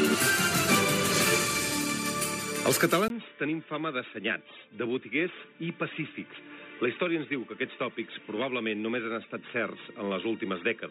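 At 3.08 s the audio breaks for a 20 ms silence. From there to the end it sounds dull and boxy, with nothing above 3.8 kHz. It drops about 5 dB and gains faint new background noise. The likely cause is an input switched to a poorer device.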